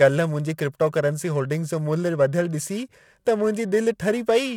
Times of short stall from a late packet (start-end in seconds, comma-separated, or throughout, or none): none